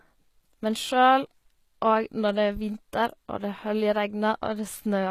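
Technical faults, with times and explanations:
Throughout, HE-AAC compression: likely low-bitrate coding, fitting about 20 kbps, rebuilds treble from copied lower bands, leaving s sounds gritty and lispy, nothing above 14.9 kHz.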